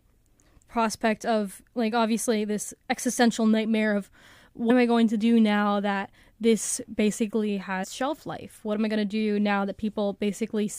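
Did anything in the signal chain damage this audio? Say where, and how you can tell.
Yes. Damaged data in a compressed stream, at the codec stage: brief disruptions at 4.67–4.71 s, after "this existential nightmare of", and at 7.83–7.85 s, before "shelf life". The decoder misreads corrupt frames and resyncs.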